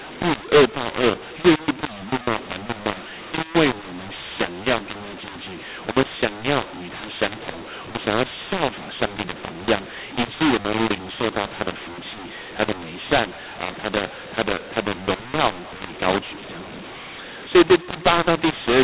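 From start to finish the speech carries a mu-law and A-law mix-up: telephone audio written as mu-law is read back as A-law, scrambling levels so some come out too loud, others too quiet, and pauses fill with hiss. Unlike clipping, the harshness persists even in quiet passages.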